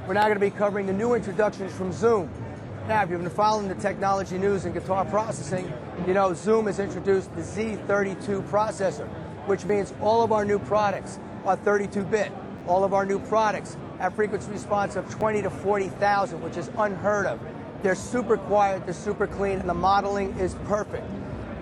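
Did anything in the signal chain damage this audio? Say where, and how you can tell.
Yes, there's a repeated buffer at the driver/buffer stage: quick stutters at 9.67–9.69 s and 12.59–12.61 s, and a shorter one at 15.21 s. New audio missed its deadline, so the device replayed its last block of about 12 ms, which fits a 512-sample buffer, twice, twice, then once, with a hard join each time.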